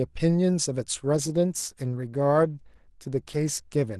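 An adaptive stream at a lower bitrate takes over at 1.04 s and continues to the end of the clip. The player switched to a cheaper encoding of the same speech partway through, with no pause or dropout at the switch. From that moment the codec artefacts grow, and the quality drops abruptly. That sound fits a change from about 64 kbit/s Opus down to about 16 kbit/s.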